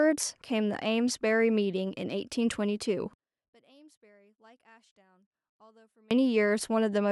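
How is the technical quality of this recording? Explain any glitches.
The recording has one clear fault. One channel inverted, from 3.13 to 6.11 s: heard in mono, the speech falls by about 35 dB to a faint residue. The likely cause is one stereo channel reversing polarity, so the centred voice, common to both channels, cancels when they are summed.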